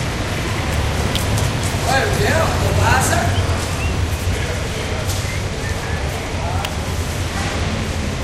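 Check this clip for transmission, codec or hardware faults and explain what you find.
Two electrical switching spikes stand out, at 1.16 s and 6.65 s. Each is a sharp snap laid over the sound. The first peaks a little below full scale, the second louder still. A nearby switch or static discharge arcing into the audio line is the likely cause.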